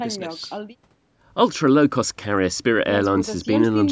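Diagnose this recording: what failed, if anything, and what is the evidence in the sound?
Nothing failed: the speech carries the ordinary imprint of call microphone processing, with the lowest bass trimmed by its high-pass filter and no content above 8 kHz, which is how that stage normally leaves a signal.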